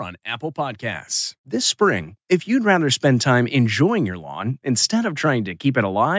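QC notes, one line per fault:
0.54 to 2.18 s, automatic gain rising: the level climbs by about 5 dB over roughly 1.6 seconds, with the voice and the background noise swelling together rather than the speech alone getting louder. The automatic gain control judged the input too quiet and raised its gain gradually, so everything in the signal rises at once. The call microphone processing, which leaves nothing above 8 kHz, does not cause this rise.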